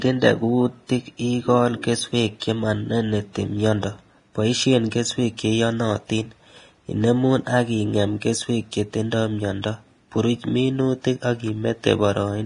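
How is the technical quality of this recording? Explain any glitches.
The technical quality is poor: one fault runs through the whole speech recording. There is nothing above about 10.6 kHz, and the remaining upper band sounds hissy and grainy, with roughened tones and smeared consonant onsets. This is likely Vorbis compression at a low setting, with heavy damage that fits a bitrate of around 30 kbps. The encoder lowered its cut-off and quantised the treble so coarsely that fine detail was replaced by noise of similar energy.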